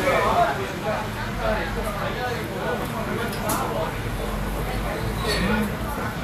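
A short recording of everyday sound carries audible codec damage from start to finish, most likely from Vorbis compression at a low setting. The treble cut-off sits lower than normal, and the upper range that remains has a hissy, grainy texture. The encoder has quantised the treble so coarsely that fine detail has turned into noise of similar energy. Tonal parts sound roughened and transients are smeared, which fits a bitrate around 36 kbps. Two sharp, isolated clicks occur at 3.53 s and 4.97 s. Each is a single instant with no audible gap, which points to dropped samples, likely only one or so each time. At each point the waveform jumps straight from one value to a later one, and that discontinuity shows as a thin vertical line across the spectrum.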